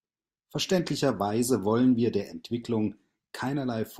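No faults turn up anywhere in this speech recording.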